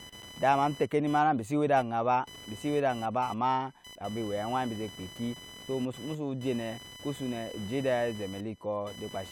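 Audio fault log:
throughout computer activity noise: noise pulsing near 1 kHz, about 20 dB below the speech, tracks computer activity through the shared ground rather than the speech, unlike steady hum.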